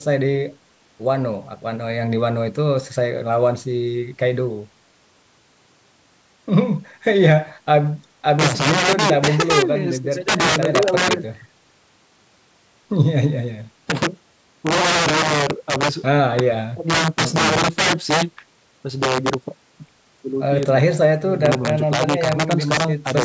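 Integer overflow runs throughout the speech: the level was driven about 8 dB past the integer limit, so the loudest few percent of samples wrap to the opposite sign instead of being held at full scale. Each wrapped peak becomes a violent crack, far harsher than clipping, against band-limited audio that stops at 8 kHz.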